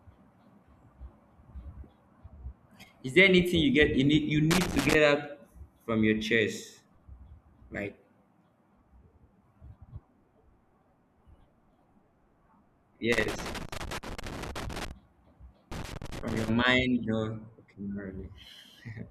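At 4.51 s, right after "need you", a burst of loose connector crackle lasts until 4.94 s. A worn or dirty contact is making and breaking as it shifts, so the speech is chopped into fragments. It comes through as irregular scratching. It returns at 13.12 s and runs to 14.91 s. A third burst follows from 15.72 to 16.49 s. Each is ragged and uneven, not a steady buzz.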